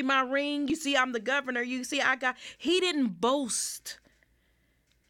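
At 0.70 s, just after "my ring" and before "see I'm the governor", and again at 2.68 s, after "you see I got" and before "didn't boast", the speech gives a tiny forward skip. This is overlap between stream segments. The two events are about 2.0 s apart, which fits the segment length. Where adjacent segments claim the same few milliseconds, that material is trimmed as if it were duplicated, so the waveform jumps. Unlike a dropout, no silence or gap is heard.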